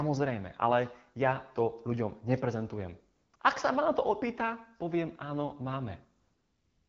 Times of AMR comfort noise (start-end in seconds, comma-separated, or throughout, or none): 3.15-3.39, 6.21-6.88